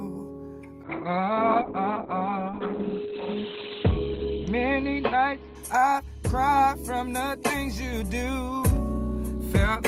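From 0.85 s to 6.09 s the clip goes through a call bitrate drop. The bandwidth estimate fell, and the encoder had to go from about 32 kbps down to about 7 kbps, staying at the floor for roughly three seconds. Coarser coding turns the sound rough and watery. The audio band shrinks from 20 kHz to 4 kHz, so it turns muffled. On a spectrogram everything above 4 kHz goes blank over that span, and the energy below looks smeared and blocky.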